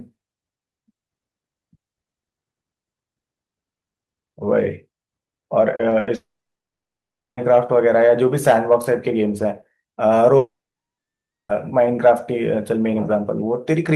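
At 5.75 to 5.81 s and again at 5.89 to 5.93 s there is short concealed packet loss. About 40 ms and then 20 ms of audio never arrived, and the receiver extrapolated the preceding sound to cover each hole. Both come through as brief smears before normal audio resumes.

From 5.99 to 6.09 s a burst of packet loss removes about 80 ms. The concealment stretches the last sound into a short, fading buzz or hiss, and the audio picks up further along with that portion gone.

From 6.15 to 7.39 s, and from 10.37 to 11.51 s, the sound trails off into a brief fade and then roughly a second of silence, 1.1 s and 1.0 s respectively. A long network dropout is the likely cause. Each gap loses over a second of material, and the audio returns later in the stream without it.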